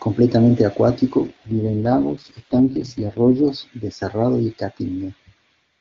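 An AMR rate drop runs from 1.27 to 3.48 s. Over a weak radio link the AMR-WB codec was pushed to its lowest setting, trading bits for error protection. The bandwidth holds with no gap, but the speech turns raspy and synthetic, which fits a fall from 23.85 to 6.6 kbit/s, before clearing again.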